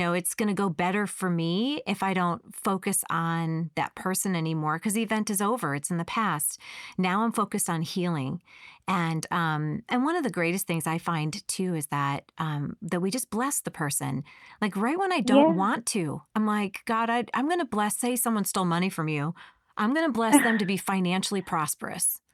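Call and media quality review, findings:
No faults found: the speech signal shows no audible capture, transport or playback defects at any point in the recording.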